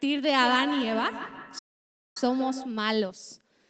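Feedback echo between two devices runs from 0.38 to 2.86 s: a second device replays this audio, the microphone recaptures it, and thinning, ringing repeats return roughly every 150 ms, peaking about 10 dB below the speech. A playback stall from 1.58 to 2.17 s silences the output for 570 ms mid-flow, likely because the player ran out of data or was blocked.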